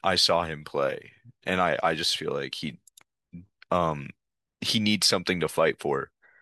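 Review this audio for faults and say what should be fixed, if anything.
No faults turn up in this speech recording, so nothing needs to be fixed.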